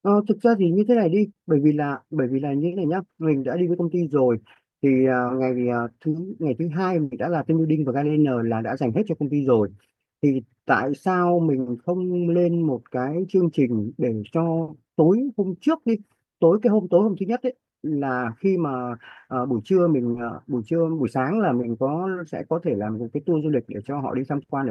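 Speech, marred by two network losses. At 7.04 to 7.12 s a burst of packet loss left about 70 ms of audio that never arrived in time to be played. The receiver covered the hole by extending the last sound it had and fading it down, so that stretch comes out as a held, dimming buzz or hiss. The audio then picks up 70 ms further on, with whatever fell in between simply gone. At 20.12 to 20.15 s a short concealed packet loss removed roughly 20 ms. The decoder bridged it by continuing the preceding sound, following its pitch or imitating it as shaped noise, and then cross-faded back into the real signal. The result is a brief smear or wobble rather than an audible gap, and a quick consonant there can drop out entirely.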